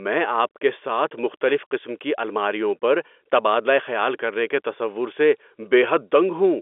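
Nothing stood out on listening to this telephone-band speech, which sits within the narrow line bandwidth with no content above about 3.7 kHz.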